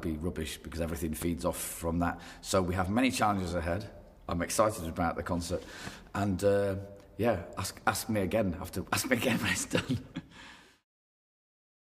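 At 1.22 to 1.25 s a single loud pop cuts through, a sharp pulse roughly 10 dB above the surrounding audio, which carries on underneath. The likely cause is a sudden voltage step or spike from a plug, switch, static discharge or driver glitch.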